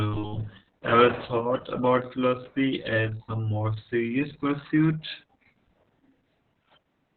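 Right from the start and all the way through, this speech has heavy Opus voice compression. Nothing gets through above 4.3 kHz, so the codec has dropped to narrowband SILK. That's why it sounds muffled and phone-like. The excitation is coded so coarsely that the voice turns hoarse and a bit robotic. That level of damage points to a very low bitrate, somewhere around 6 kbps.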